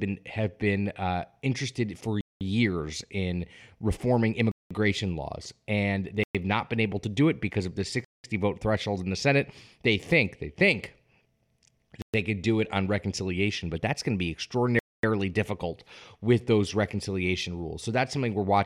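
Six times the speech drops abruptly to dead silence and then resumes: at 2.21 to 2.41 s, right after "been uh interested for"; 4.52 to 4.71 s; 6.24 to 6.35 s; 8.05 to 8.24 s, between "it because of the" and "vote threshold in the"; 12.02 to 12.14 s, just before "could do it on"; and 14.79 to 15.03 s. The gaps last 0.11 to 0.24 s. These are likely Bluetooth stalls, where interference delayed packets until the headphones' buffer emptied and playback paused.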